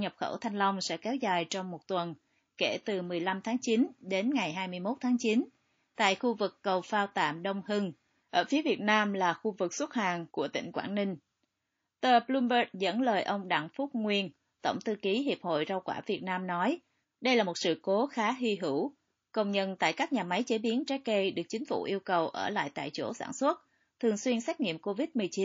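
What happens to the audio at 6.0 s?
Just before 6.0 s, from 5.95 to 5.98 s, there is pre-echo: a burst of hiss about 28 ms long, rising about 13 dB above the surrounding floor, leads into the onset of "khu vực cầu phao". The encoder seems to have kept a long transform window of roughly 72 ms over the attack instead of switching to short blocks. The quantisation noise meant for the loud onset therefore spread back into the quiet gap before it, and the attack sounds softened and smeared.

The same passage also carries the MP3 compression damage heard across the whole clip. The sound is watery and swirly, with sibilants turning into metallic chirps as weak frequency lines drop in and out between frames. The likely cause is heavy MP3 encoding at a low bitrate, consistent with about 32 kbps, which also explains why the codec had so few bits to spend on the attack.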